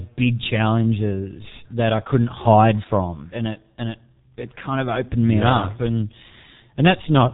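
Throughout, the speech is muffled and hoarse, with smeared consonants and nothing above 3.8 kHz: heavy G.723.1 codec damage at roughly 6.3 kbit/s, updating its voice model only every 30 ms.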